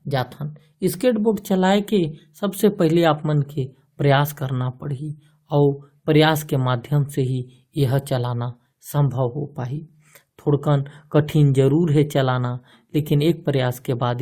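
Speech recording with no technical faults detected.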